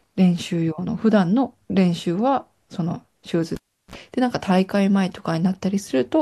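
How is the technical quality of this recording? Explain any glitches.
One glitch interrupts the speech. From 3.55 to 3.95 s, a pop drops the sound into near silence for 0.36 s, then a 44 ms burst of 60 Hz mains buzz and a second pop: a cable pulled and plugged in while live.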